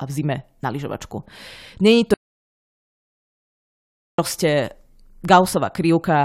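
A speech recording with an audio dropout to silence from 2.14 s to 4.19 s. The speech stops abruptly mid-flow. About 2.05 s of silence follows, with no room tone at all. Then the speech resumes just as suddenly. Anything said in that gap is lost. The likely cause is the input briefly going missing, through a disconnected device, a broken link or a mute, while recording continued and wrote silence.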